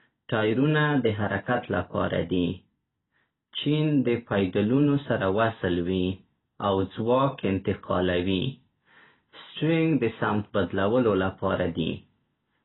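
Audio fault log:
Throughout, AAC compression. Nothing is heard above 3.9 kHz, so the speech sounds dull and muffled. Heavy codec damage leaves a smeared, warbling, fizzy texture on held sounds and sibilants. This is likely AAC-LC at a low bitrate, about 16 kbps.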